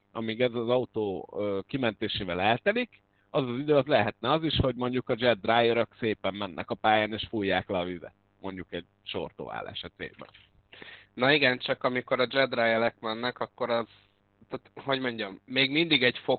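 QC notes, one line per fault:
throughout, mains buzz: a steady, raspy buzz sits under the speech at about 35 dB below it. It is built on a 50 Hz mains fundamental, and the rasp comes from sharp switching spikes entering the signal twice per mains cycle, most likely through a dimmer, a rectifier or an unshielded cable. Those spikes spread energy into a dense ladder of 50 Hz harmonics that climbs into the kilohertz range, so it is heard as a harsh buzz rather than a clean low hum.
throughout, Opus voice compression: the speech is muffled, hoarse and slightly robotic, with heavy codec damage across the whole clip. The band stops at roughly 4 kHz, which points to narrowband SILK linear-prediction coding at a very low bitrate, around 8 kbps, and fits 20 ms frames. At that rate the excitation is coded coarsely.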